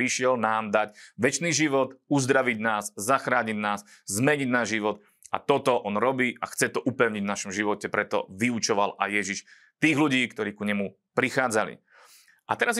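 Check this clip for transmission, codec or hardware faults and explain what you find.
Nothing turned up in this speech recording: no transmission, codec or hardware faults to report.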